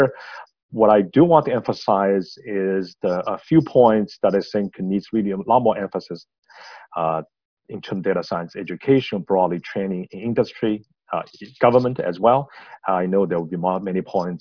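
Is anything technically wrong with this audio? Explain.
No, nothing technically wrong.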